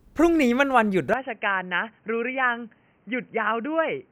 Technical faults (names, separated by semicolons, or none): input switched to a poorer device